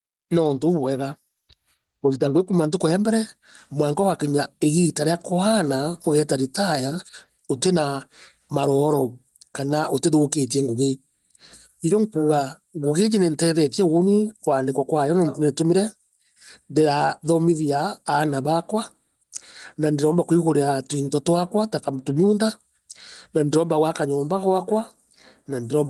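Throughout the speech, the gain is pulled down by roughly 5 dB under each loud sound. This gain pumping likely comes from excessive input gain clamped by a fast limiter.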